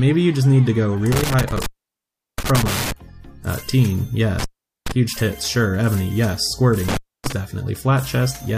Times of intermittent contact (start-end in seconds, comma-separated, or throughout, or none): 1.12-2.92, 4.39-4.92, 6.88-7.32